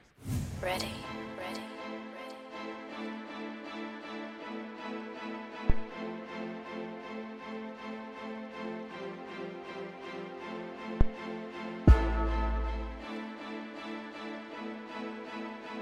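At 5.70 s and again at 11.01 s a phantom power thump appears. The supply is switched on or off on a live input, and the voltage step passes through the coupling capacitors as a deep thump peaking near about -11 dBFS, then about -9 dBFS, decaying within 42 ms and 23 ms.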